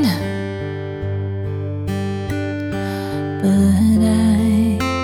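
No technical faults are audible.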